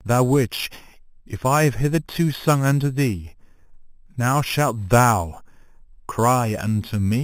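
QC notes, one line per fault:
Throughout, imaging from sample-and-hold upsampling: the speech was brought up from a low rate, which fits an 8 kHz source, by repeating samples without smoothing, so mirrored spectrum copies fill 4 to 8 kHz about 16 dB down, a bright metallic fizz following the speech.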